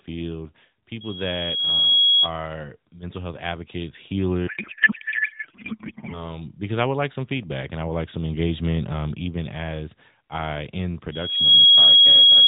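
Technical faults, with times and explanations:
1.00–2.31 s, loudspeaker feedback squeal: a 3.3 kHz tone swells over about a second to roughly 10 dB above the speech, as the mic-to-speaker loop gain exceeds one.
4.48–6.40 s, codec payload misread: the narrowband speech becomes garbled warbling noise, consistent with octet-aligned AMR frames decoded as bandwidth-efficient, which puts every field in the wrong place.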